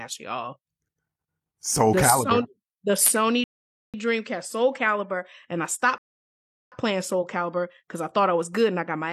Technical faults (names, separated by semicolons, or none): rebuffering stall